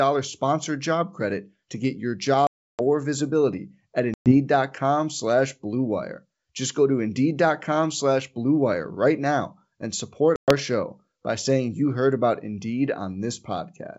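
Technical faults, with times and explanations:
2.47 to 2.82 s, 4.14 to 4.37 s and 10.36 to 10.52 s: packet loss on an ADPCM call. There are abrupt silent holes of 320 ms (around thirty packets) and 120 ms (around ten packets each). With no samples arriving, the receiver's adaptive predictor and step size drift from the sender's, so the speech resumes with brief, slight distortion before re-converging within tens of milliseconds. The wideband G.722 coding around the gaps stays clean.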